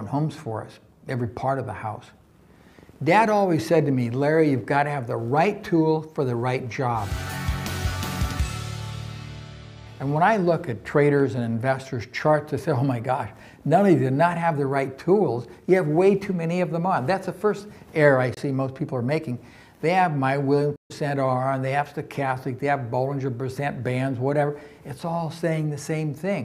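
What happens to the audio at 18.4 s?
Right around there, from 18.34 to 18.38 s, the sound briefly cuts out. It's a short hole of about 23 ms with hard or very quickly faded edges, and then the audio picks up further along, as though it kept running during the gap. That's most likely a Bluetooth dropout: a packet didn't reach the headphones in time, so the output went silent until good data arrived. The gap's length fits a single lost packet's worth of audio.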